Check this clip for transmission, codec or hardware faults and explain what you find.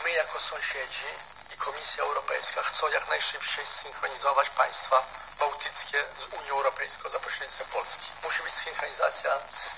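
No faults found here.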